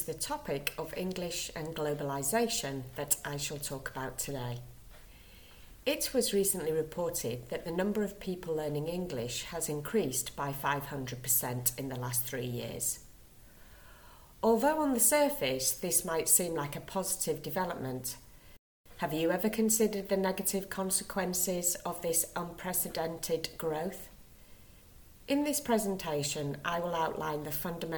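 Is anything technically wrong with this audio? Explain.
Yes. At 18.57 s the sound cuts out abruptly mid-flow and stays silent for about 290 ms, until 18.86 s, before continuing. This is a playback stall: the player likely ran short of buffered data, or its thread was briefly blocked, so output halted until it recovered.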